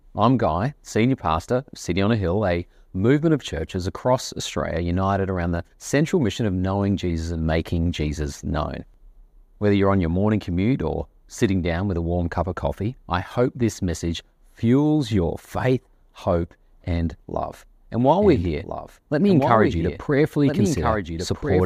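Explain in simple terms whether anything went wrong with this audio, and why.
From 18.21 s to the end there's a doubled audio track: a somewhat quieter copy of the speech trails about one and a half seconds behind, likely from a second, slower recording path.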